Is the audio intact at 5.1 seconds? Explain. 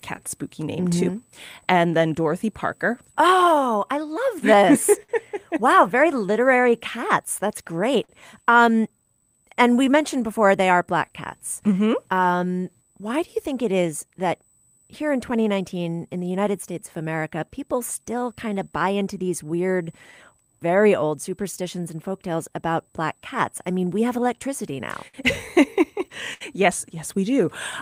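No. Between 5.03 and 5.11 s there is a short stall from a late packet: a packet arrived late, the jitter buffer ran dry, and the receiver held the last sound for 58 ms before resuming from the same point. Nothing is lost, only prolonged, with a slight buzz or dip. A dropout would instead leave a gap or skip ahead.

That moment also lies inside the repeated timing corrections running from 0.02 to 24.72 s. The receiver keeps inserting small repeats so playback runs at 96% speed, adding about a second overall. These are scattered, uneven hiccups rather than one held sound.

Behind both is clock drift between sender and receiver. The sender's clock runs roughly 5% slow, so the buffer keeps draining. That steady pressure causes the ongoing repeats and makes stalls like this one possible. It differs from network jitter because it always pushes in the same direction.

A USB whine is present as well: a fixed tone at 8 kHz, strongest at 16 kHz, about 30 dB below the signal. 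It comes from the bus's 125-microsecond microframes leaking into the power or ground. Its unchanging pitch distinguishes it from mains hum, which sits far lower.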